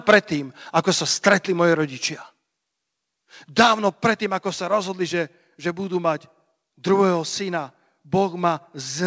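From 0.08 to 0.17 s the speech hits a hard ceiling. This is likely microphone overload: the input is driven about 7 dB past the converter's limit. Around 7 percent of samples lose their tops. The result is a harsh, crackly edge.

At 0.14 s, inside that distorted burst, the level falls abruptly by about 3 dB. This sounds like the microphone volume stepped down, likely by the call software reacting to the clipping. A second step of about 4 dB comes at 3.9 s. Speech and background drop together each time. Through the G.722 call path, nothing sits above 8 kHz.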